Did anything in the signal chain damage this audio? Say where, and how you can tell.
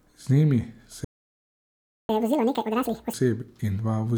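Yes, at the playback end. The speech cuts out at 1.04 s and stays silent until 2.09 s, a full second of dead air. It then carries on where it stopped, which points to a playback stall, likely the player's buffer running dry or its thread getting blocked.

Right after that comes catch-up at higher speed. From 2.09 to 3.14 s the speech runs at double speed and sounds roughly ten semitones higher. The player is resampling its backlog to win back the lost second, then it drops back to normal pitch.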